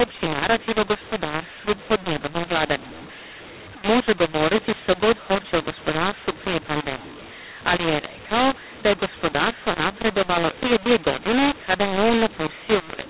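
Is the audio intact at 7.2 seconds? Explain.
No, at 7.2 seconds the audio has a mu-law and A-law mix-up, and it runs through the whole clip. The speech was coded as A-law but decoded as mu-law, which scrambles levels and lifts quiet samples, so it sounds harsh and distorted, with noise filling the pauses.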